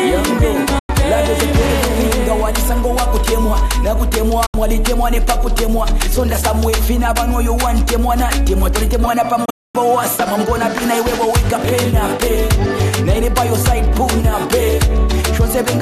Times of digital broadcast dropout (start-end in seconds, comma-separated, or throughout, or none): 0.79-0.90, 4.46-4.55, 9.45-9.75